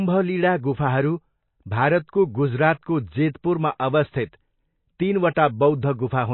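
Throughout, the speech has no content above 4 kHz and a plainly audible watery, swirling texture, likely from MP3 compression at a low bitrate, consistent with about 24 kbps.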